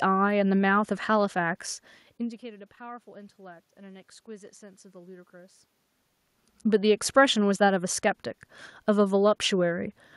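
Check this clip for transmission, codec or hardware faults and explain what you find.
No transmission, codec or hardware problems can be heard in the speech: the background noise belongs to the room, and the level changes at about 2 s and again around 5.5 s come from the talker moving relative to the microphone, not from the signal chain.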